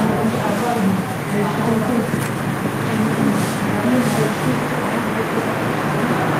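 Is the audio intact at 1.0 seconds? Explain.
Yes, the audio at 1.0 seconds is intact, with no dropout, click, distortion or other fault at that point.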